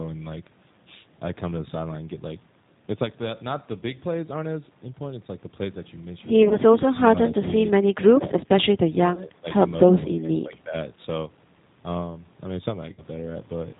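A speech recording carried throughout by the G.729 codec at 8 kbit/s, whose plainly audible damage leaves the voice band-limited below 4 kHz, slightly rough and synthetic. VoIP packet loss concealed by the speech codec appears at 6.43–6.57 s, with 40 ms missing in short gaps, then at 9.15–9.21 s and 12.93–13.04 s, where the decoder extrapolates from its last frames with fading gain. The voice dips sharply, by about 20 to 25 dB, at 6.86–7.08 s, 7.74–8.65 s, 8.91–9.47 s, 9.88–10.00 s and 10.16–10.74 s, likely speech suppressed in double talk by an echo canceller reacting to the far side talking over it.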